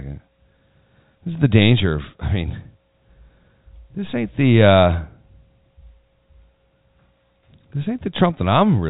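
Nothing's wrong with this speech recording; it's ordinary telephone-band audio over G.711 A-law, which you can hear in the way nothing reaches above about 3.8 kHz, and there are no technical problems to point to anywhere in it.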